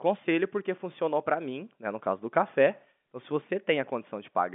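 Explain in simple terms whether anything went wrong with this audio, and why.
Nothing went wrong: the speech arrives over a normal telephone-style G.711 telephone coding path, which carries roughly 200 Hz to 3.5 kHz and nothing above about 3.7 kHz, so its narrow, phone-like sound is simply how that line carries audio.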